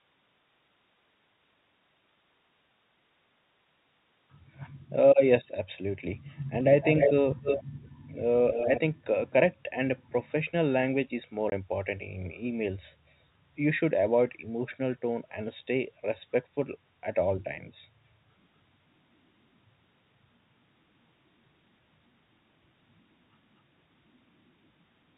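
A speech clip over a telephone-band line, with nothing above 4 kHz. At 6.81 to 7.13 s and 7.42 to 7.63 s, a delayed copy of the talker returns about as loud as the original, and at 8.52 to 8.8 s it is a little quieter. All three trail by 297 ms. This is an echo leak, likely from a far-end loudspeaker whose echo canceller let its microphone pickup back into the call. At 11.5 s there is a hard-edged 20 ms hole, which is packet loss filled with silence: one lost packet replaced by nothing.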